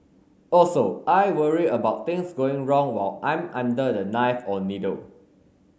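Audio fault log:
No faults heard anywhere in this speech recording.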